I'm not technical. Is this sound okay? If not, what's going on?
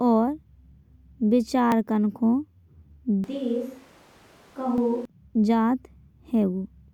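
No. At 1.72 s and again at 4.78 s the speech jumps ahead. That is most likely a dropped buffer (overrun): a tiny sliver of sound was lost.

From 3.24 s to 5.05 s the voice turns hollow, roomy and quieter, with more background noise. That sudden change is likely a switch to a distant microphone.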